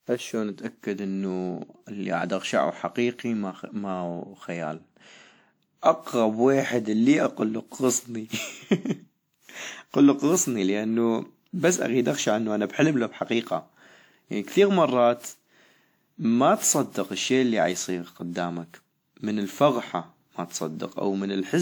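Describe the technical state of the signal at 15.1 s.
At 15.1 s you're hearing generation loss, which runs through the whole clip. The speech sounds swirly, smeared and hollow, with blurred attacks, most likely from around seven rounds of WMA re-encoding near 96 kbit/s, each pass stacking fresh quantisation noise.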